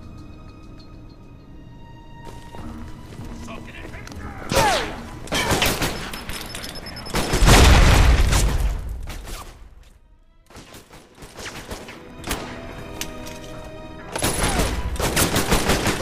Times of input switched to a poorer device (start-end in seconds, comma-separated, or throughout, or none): none